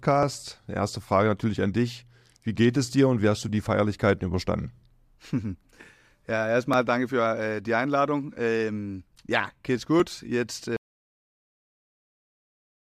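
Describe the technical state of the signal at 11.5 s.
Audio dropout to silence, from 10.77 s to the end: the input was likely lost while the recorder kept writing silence, so the sound cuts out abruptly into total silence.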